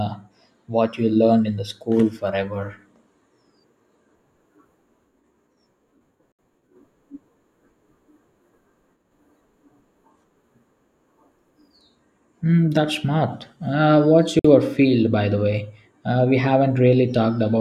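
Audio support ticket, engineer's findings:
Speech: gap at a join of encoded pieces at 6.32–6.39 s (69 ms) and 14.39–14.45 s (53 ms). Abrupt silence with smeared edges; encoder start delay and last-frame padding left in at segment joins. Unlike a dropout, speech resumes exactly where it stopped, with nothing missing.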